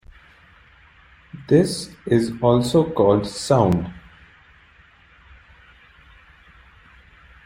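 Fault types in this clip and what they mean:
Clock drift buffer slips: from 0.83 s to 6.62 s a click recurs every 1.44 s, about five times, likely from two devices on separate clocks drifting apart. Each fits a few dozen samples dropped or repeated, a spacing pointing to roughly 500 ppm mismatch.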